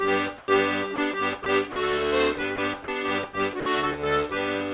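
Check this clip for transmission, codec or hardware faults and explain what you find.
Yes, there's one recurring fault: sound dropped by the voice detector. The audio briefly gives way to flat, steady noise at 0.38–0.48 s, 0.96–0.98 s, 1.44–1.46 s, 1.72–1.76 s, 2.56–2.58 s, 2.84–2.88 s and 3.6–3.66 s, then snaps back. Likely cause: the sender's detector mistook quiet passages for background, stopped sending, and the receiver filled in comfort noise. The band stops at 4 kHz, which fits a G.711 call path.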